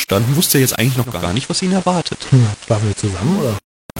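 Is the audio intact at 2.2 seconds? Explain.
No. At 2.2 seconds the speech is inside a stretch from 0.97 to 3.57 s where the receiver is carrying the analogue FM broadcast instead of the digital stream. This is digital radio blending to analogue. The digital signal dropped out, so the radio cross-faded over about 0.37 s to the FM version of the same station. FM hiss sits roughly 25 dB under the speech. The level is about 1 dB lower.

The same moment also carries low bit depth without dither. It runs through the whole clip. The samples are rounded to very few steps, and the grain fits about 5 bits. With no dither, the rounding error tracks the speech. It is heard as gritty, signal-shaped distortion roughly 15 dB below the speech. Heavy requantisation is the likely cause.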